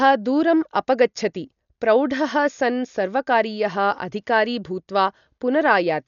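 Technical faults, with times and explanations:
Throughout, Dolby Digital compression: dull speech, nothing above 6.9 kHz, rough fluttering noise around tones, likely from heavy AC-3 coding near 48 kbps.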